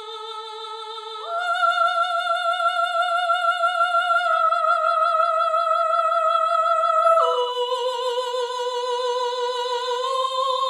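No technical faults can be heard anywhere in the audio, and the signal holds steady throughout with no interruptions, distortion or level problems.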